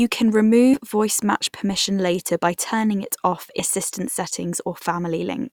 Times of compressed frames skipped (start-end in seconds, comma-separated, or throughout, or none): 0.73-0.76, 3.59-3.63